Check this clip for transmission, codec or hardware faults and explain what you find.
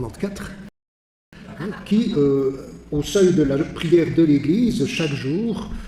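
Two faults are audible: a playback stall followed by a stretch of time-compressed catch-up.

From 0.69 s to 1.33 s the sound cuts off mid-flow and the output goes fully silent for about 0.64 s. This is a playback stall, likely the player running out of buffered data or having its output thread blocked until it recovered. On a waveform it shows as an abrupt flat line at zero, and on a spectrogram as a clean vertical gap with no energy in any band, edged by hard onsets on both sides.

From 1.33 s to 4.33 s the audio resumes but runs hurried, at about 1.1 times normal speed with its pitch unchanged. This is time-compressed catch-up: to work off the backlog built up during the gap, the player trims small slices out of the signal and cross-fades the joins. On a spectrogram the harmonics stay at their usual heights while events arrive closer together, with smearing at the splice points.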